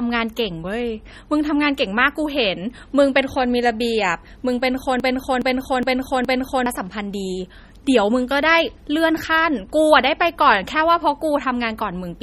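MP3 compression runs through the whole of this speech clip, and the damage is plainly audible. Nothing is present above 14.5 kHz, and the sound has a watery, swirling quality. The likely cause is an encoder short of bits, which fits a low bitrate of around 32 kbps: it cut the treble at a fixed point and dropped weak frequency components that flicker in and out between frames, smearing consonant attacks and leaving s sounds metallic. A broken-record loop runs from 5.0 to 6.66 s. A fragment of about 0.42 s repeats exactly, back to back, four times. The likely cause is a player, encoder or stream that stalled and kept resending the last piece it held, so whatever speech should have filled that stretch is lost.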